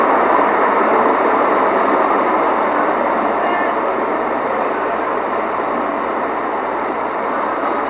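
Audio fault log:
throughout, mains hum: a steady 60 Hz tone with low harmonics sits about 35 dB under the sound. A ground loop or nearby transformer couples the power line in.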